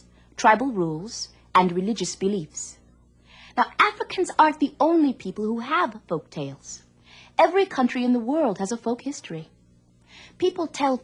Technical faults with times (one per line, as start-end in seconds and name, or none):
none